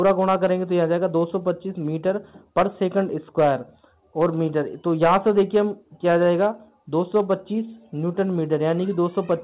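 Nothing technically wrong turns up here; the sound came through a call link using G.711 A-law at 64 kbps, so there's simply nothing above 4 kHz, which is just how that path sounds rather than anything going amiss.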